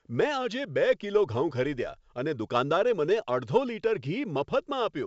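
No technical faults can be heard in the speech. It comes through the G.722 wideband telephone coding with at most a faint trace of the codec, and the top end stops at about 7.7 kHz, which fits that codec's highest-bitrate mode.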